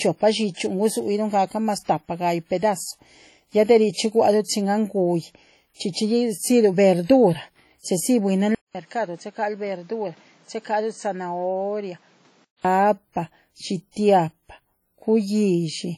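A speech recording, likely passed through a WMA encoder at a rate that fits around 32 kbps, carries heavy codec damage throughout: ringing, washy sound with hiss that swells and fades with the voice. The same block-based coding spreads noise ahead of sharp attacks, so pre-echo puts a short hiss and a smeared onset at 0.54, 4.44 (just before "chin anh"), 5.92 and 7.05 s, each lasting 32 to 46 ms. From 8.55 to 12.65 s the input likely switched to a poorer device. After about 200 ms of silence the sound goes dull, with nothing above 8.6 kHz, around 10 dB quieter, and with new background noise roughly 30 dB below the speech.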